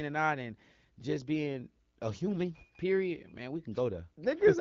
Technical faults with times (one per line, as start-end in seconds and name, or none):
none